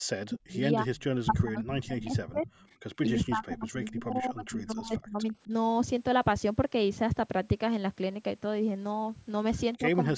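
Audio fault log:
0.00–0.87 s, speech suppressed in double talk: the voice dips by about 40 dB in pieces, likely an echo canceller muting both talkers while the far side spoke.
0.96–1.03 s, echo leak: a faint copy of the voice returns 252 ms late, about 30 dB down, likely residual loudspeaker echo the canceller missed.
1.25–2.50 s, speech suppressed in double talk: about a second of the voice is pulled down by up to about 30 dB, likely gating during simultaneous talk.
3.06–5.51 s, speech suppressed in double talk: roughly two seconds of intermittent attenuation, up to about 25 dB, likely the canceller ducking the near talker under overlapping speech.
4.11–4.16 s, echo leak: a brief 252 ms-delayed echo scrap, about 35 dB below the voice, likely uncancelled loudspeaker pickup sent back.
9.74–9.78 s, echo leak: another short echo fragment at 252 ms delay, about 35 dB down, likely the same leak through the canceller.
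9.79–9.88 s, speech suppressed in double talk: a short dip of about 10 dB, likely the suppressor reacting to overlapping far-end speech.
10.05–10.18 s, speech suppressed in double talk: the final moment drops by about 20 dB, likely double-talk suppression cutting into the voice.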